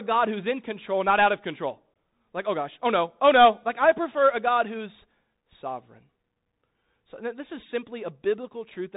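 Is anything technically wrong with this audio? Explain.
Yes. Throughout the recording, the speech has passed through a Bluetooth CVSD headset codec. This narrowband link encodes each sample as a single up-or-down bit with an adapting step size, which fits a 64 kbit/s CVSD channel. Nothing above 4 kHz survives, so the speech sounds boxed-in and thin. Loud, bright moments outrun the step size and distort, s sounds come out scratchy, and a grainy hiss sits beneath everything. The damage is plainly audible across the whole clip.

At 1.94 s, just after "not out of control", there is unconcealed Bluetooth headset packet loss. A handful of short voice packets between headset and phone never arrived, and nothing was done to cover the gap. The result is an 18.8 ms hole in the speech with hard edges that can click. When the speech resumes, it comes back briefly quieter while the CVSD step size rebuilds.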